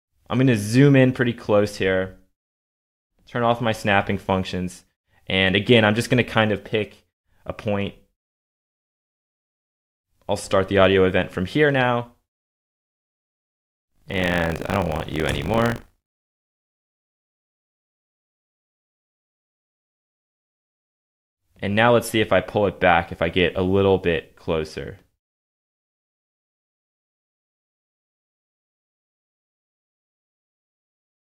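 Buffer tearing runs from 13.9 to 18.0 s, a robotic 50 Hz rattle riding on the sound. The buffer writer and the hardware reader have slipped, so about a tenth of every 20 ms period replays audio around 40 ms stale. The waveform shows hard splices every 20 ms, and the spectrogram shows evenly spaced vertical striping.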